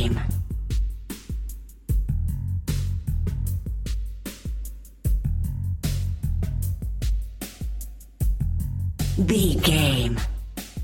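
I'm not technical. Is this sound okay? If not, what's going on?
Yes, this sound is okay; nothing is going wrong that needs explaining.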